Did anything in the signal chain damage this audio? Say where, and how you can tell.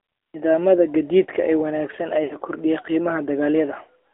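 Yes. The damage is at the codec stage and runs through the whole clip. This speech has passed through the AMR narrowband mobile codec. The band stops at about 300 Hz below and 3.5 kHz above, so nothing bright survives. The voice sounds buzzy and synthetic. That comes from a vocal tract model driven by sparse pulses, not from the real waveform. The plainly audible damage fits a mid-rate mode, around 10.2 kbps.

The second fault is in the network stage. It comes right after "gaadiidka ee wanaagsan", from 2.24 to 2.36 s. Here there are lost AMR speech frames. About 60 ms of sound fails, which fits three lost 20 ms frames. The decoder repeats its last good pitch and filter settings at falling gain. So the sound smears and sags rather than cutting off sharply. It then returns weak or rough for a moment.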